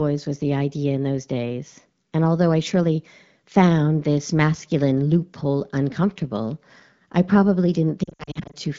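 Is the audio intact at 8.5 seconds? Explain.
No. From 8.03 to 8.56 s there are lost AMR speech frames. Frames failed their checksum, so the decoder reused the last good pitch and vocal tract settings with falling gain. The gaps total 280 ms, the longest 60 ms, and sound as dips and warbles sinking toward near silence.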